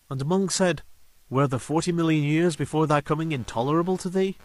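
The speech here has been reduced to low bit depth with dither: the samples are stored with few bits, which fits roughly a 10-bit word, and dither was added before rounding. The rounding error therefore turns into an even, signal-independent hiss rather than distortion. It sits about 40 dB below the speech for the whole clip, a constant wash under every syllable and in the gaps between them. From 3.2 s to the end of the clip, computer activity noise joins it. Changing processor or graphics load is disturbing the shared ground of the audio circuit, and the result is a buzzy, chirping pulse repeating at around a hundred times a second. It sits about 30 dB below the speech and tracks the machine's activity rather than anything in the speech, so it stands out as a separate, gritty layer above the steady hiss.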